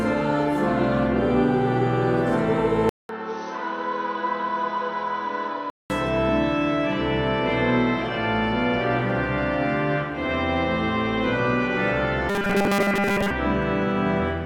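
From 2.89 to 5.9 s the audio turns dull and quieter, by about 10 dB, with a 200 ms gap at the switch and faint new background noise; the input was likely switched to a poorer device. Between 12.29 and 13.31 s a rigid, metallic 200 Hz buzz takes over much of the sound, likely robotic sound from repeated short buffers, each repeat about 5 ms long.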